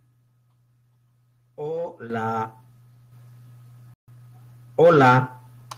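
Microphone volume stepped up at 2.1 s and again at 3.12 s: the input level jumps by about 9 dB, then by about 6 dB more. The voice and the room sound behind it get louder together, as though the call software found the microphone too quiet and raised its gain in one step each time.

A playback stall runs from 3.94 to 4.08 s. The speech cuts out mid-flow for about 140 ms of silence before resuming. The likely cause is the player running dry of data or its thread being held up, so output stopped until it recovered.

Time-compressed catch-up follows straight away, from 4.08 to 4.34 s. The speech runs at 1.5 times normal speed at its usual pitch. The player is trimming the backlog left by the stall by cutting out small slices and cross-fading across the gaps.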